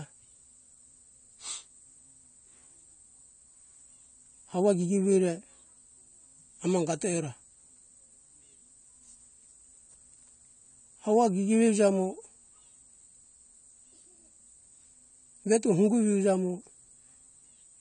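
From start to finish the speech carries AAC compression damage that is plainly audible: a dull, band-limited tone with a watery, fizzy texture on sibilants and held vowels. The likely cause is low-bitrate AAC-LC coding, consistent with a rate around 32 kbps, where the encoder discards fine spectral detail to save bits. On a spectrogram nothing appears above 9 kHz, and the remaining bands look patchy, with blotchy holes between harmonics.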